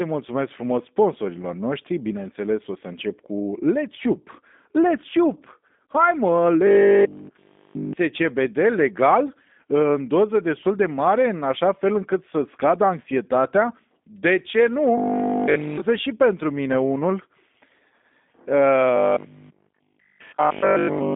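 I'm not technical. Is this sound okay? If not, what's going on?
No. The whole clip went through the G.729 codec, a phone-call format that cuts everything above 3.7 kHz. Speech sounds muffled, rough and slightly synthetic.

There is also robotic sound from repeated short buffers at 6.67–7.93 s, 14.98–15.82 s (just before "și pentru mine unul") and 18.96–21.14 s. The sound turns into a rigid 50 Hz metallic buzz. The likely cause is software repeating 20 ms scraps when new audio arrives too late.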